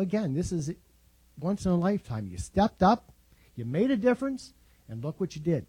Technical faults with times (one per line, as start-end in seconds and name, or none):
none